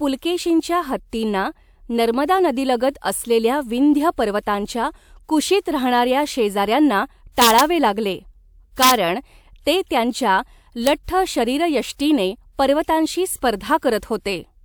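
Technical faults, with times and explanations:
7.42–7.61 s, 8.83–8.91 s and 10.87 s: integer overflow. Loud speech peaks exceeded the largest representable integer, by about 4 dB, about 2 dB and about 0 dB respectively, and wrapped to the opposite extreme instead of being limited. Each wrapped sample jumps across the full range, so these peaks are heard as harsh cracks, far sharper than clipping. The last event is a single crack between "'ते त्यांच्या" and "शरीरयष्टीने पर्वतांशी".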